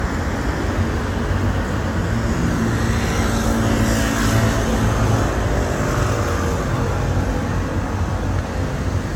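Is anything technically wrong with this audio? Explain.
Yes. Throughout, the audio has likely been through generation loss, with about five successive passes through an AAC-style codec at a rate consistent with 96 kbit/s. Each re-encode quantises again on a shifted frame grid, compounding noise and spectral gaps, so the sound is swirly and hollow, attacks are smeared, and nothing remains above 17 kHz.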